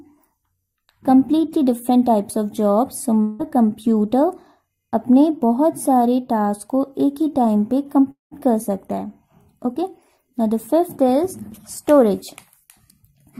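At 3.21 s the sound gives way to a fading buzz for about 0.2 s, then resumes further on; at 8.11 s a similar buzz decays into about 0.14 s of silence before returning at 8.33 s. This is likely a long network dropout, the receiver extending the last sound while audio went missing.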